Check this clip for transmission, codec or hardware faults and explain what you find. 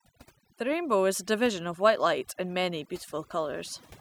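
The speech carries one processing fault rather than a transmission, codec or hardware one.

Overdone noise removal runs throughout the clip. A noise reducer set too aggressively has pulled individual frequency bands down to near zero whenever their level sat close to its noise estimate, and the softer components of the speech fell below that threshold too. Between phrases the background collapses into near silence scattered with twinkling, chirpy specks.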